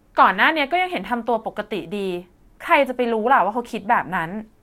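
No technical faults are audible anywhere in the recording.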